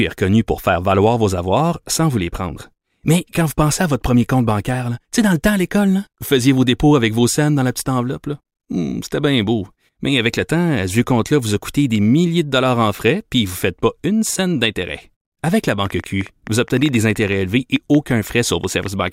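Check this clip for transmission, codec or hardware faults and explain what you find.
One fault appears near the end: a train of clicks from 15.86 to 19.09 s. Around thirty similar pulses arrive unevenly, about 8 per second, peaking roughly as loud as the speech. Likely interference or a struggling interface is injecting them. On a spectrogram they show as thin vertical broadband lines; on the waveform, as sharp spikes.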